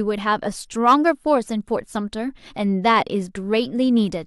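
From 0.88 to 1.09 s the speech shows hard clipping: for about a fifth of a second the waveform asks for more level than the signal path can carry, overshooting by about 3 dB, so its peaks are sheared off flat. Those squared tops add a spray of high harmonics, heard as a brief gritty crackle riding the louder syllables. Soft saturation would round the peaks and thicken the sound more gently, whereas this edge is abrupt, bright and brittle.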